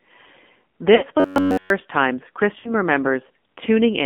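A speech recording passed through the AMR narrowband mobile codec, whose 8 kHz sampling and low-rate vocal-tract model (the buzzy, synthetic texture fits roughly 7.4 kbps) confine the sound to about 200 Hz to 3.5 kHz and give it a plainly audible coarse, processed character. Lost AMR speech frames occur twice. From 0.95 to 1.05 s, about 60 ms of frames failed, so the decoder stretched the last good pitch and spectral settings at falling gain, producing a smeared dip before the sound returns rough. The same happens from 2.60 to 2.74 s, where about 40 ms was lost. Between 1.20 and 1.70 s, the audio turns into a rigid, metallic buzz at about 94 Hz across the whole stretch. That is robotic sound from repeated short buffers, likely caused by the playback side repeating a 10.7 ms block while new audio arrived too seldom.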